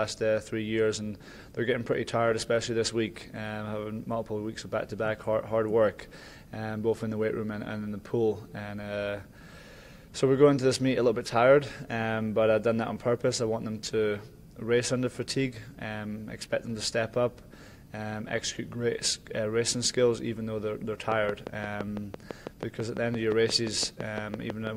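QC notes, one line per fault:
21.12–24.68 s, train of clicks: a repeating pulse, likely interference from nearby equipment or a faulty connection or power supply, lands on the signal at a regular 5.91 per second, about twenty times. Each near-identical click pokes roughly 10 dB above the sound, heard as steady ticking through to the end.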